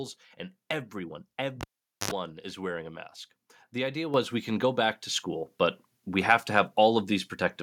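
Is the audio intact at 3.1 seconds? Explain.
Yes, at 3.1 seconds the speech runs on without any audible dropout, click, distortion or other fault.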